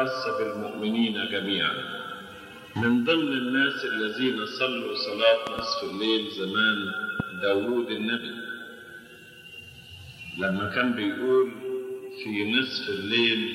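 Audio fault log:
5.47–5.61 s and 7.20–7.22 s, loud pop: a double pop jumps out first, peaking roughly 15 dB above the audio, then a single one about 10 dB up. The sound carries on underneath both, and a sudden electrical spike, likely from a plug, switch or static, would explain them.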